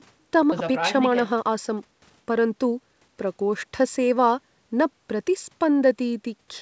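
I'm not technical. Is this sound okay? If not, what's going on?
No. At about 0.52 s there is a skip ahead: roughly a second of speech never arrived or was thrown away, and playback jumps straight to later audio with no gap or filler, so the two sides of the jump are joined almost directly.

From 0.60 s to 4.23 s there is a jitter buffer speed-up. After the jump, too much audio was waiting, so the receiver repeatedly trimmed tiny slices, about half a second in total. The speech runs roughly 13% faster at the same pitch and sounds hurried.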